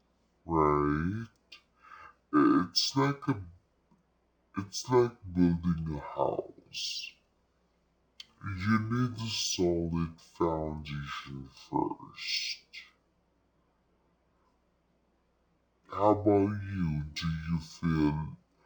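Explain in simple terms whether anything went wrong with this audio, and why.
Something went wrong from start to finish. The speech plays at half speed and a full octave low, so everything sounds slow, deep and dragged out. This is the fault called stereo read as mono. A stereo file stores left and right samples alternately, and here the player read that alternating stream as if it were one single channel. It therefore treats each stretch of sound as twice as long as it really is, which halves the speed and drops the pitch by 12 semitones.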